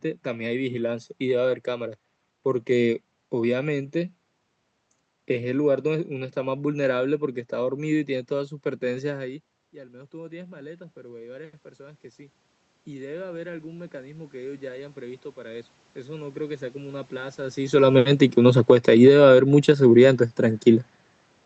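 From 17.82 s to 21.01 s the automatic gain falls. The gain control judges the input too loud or its background noise too strong and lowers its gain by about 5 dB over roughly three seconds, so the speech and the room noise behind it sink together.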